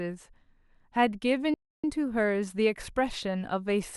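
At 1.54 s the speech cuts out abruptly and stays silent until 1.84 s, a playback stall of about 300 ms, likely caused by the player running dry of data or its thread being blocked. The waveform drops to a flat line and the spectrogram shows an empty vertical band across all frequencies.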